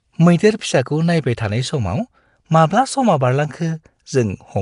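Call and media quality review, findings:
Rough, hissy halo on the speech, smeared and a bit underwater, plainly audible the whole way through. Nothing above 10.6 kHz. Likely Nellymoser compression, the old Flash mic codec. Fixed-rate block coding starves the weak bands of bits and fills them with noise, hence the hiss and smear. The damage level fits a low-rate stream, something like 44 kbps.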